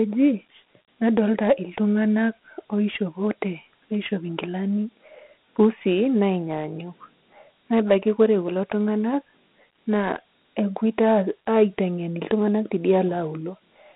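Throughout, Dialogic VOX ADPCM coding leaves a gritty hiss that follows the speech rather than sitting steady, in a 150 Hz to 3.6 kHz band.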